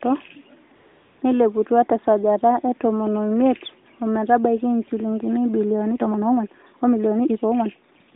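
From 0.76 to 1.22 s there is AMR comfort noise. For about 460 ms the phone treated the talker as silent and sent no speech frames. The receiving end filled the gap with synthetic noise built from a rough sketch of the background's level and spectrum. The real room sound vanishes. A steady, smooth hiss switches in at the start and out at the end. The edges of the gap sound abrupt. The whole clip stays inside the narrow mobile line of roughly 200 Hz to 3.7 kHz, with light AMR-NB colouring.

From 5.90 s to the end at 8.15 s comes a time-stretched section. The pace suddenly jumps to about 1.68 times normal speed. The pitch does not rise with it. That points to software that likely squeezed the audio to fit a length, dropping short slices to keep the pitch. The result sounds rushed.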